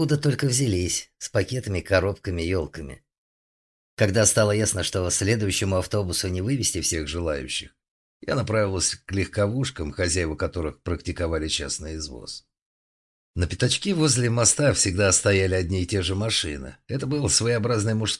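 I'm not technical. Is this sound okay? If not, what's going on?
No. From the start to 6.93 s the sound runs slightly fast and high, about 1.09 times normal speed and roughly a semitone and a half sharp. This is a wrong sample rate: it was likely played faster than it was recorded, which fits 22 kHz audio played at 24 kHz.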